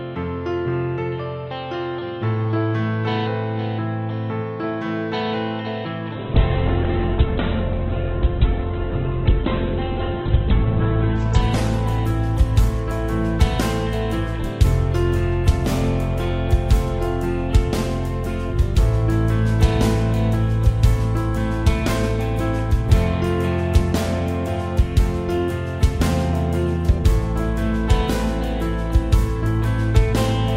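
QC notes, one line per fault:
6.17–14.23 s, call bitrate drop: the encoder got starved of bits, so the sound turns coarse and watery, muffled above 4 kHz for nearly 5 s, which points to roughly 7 kbps.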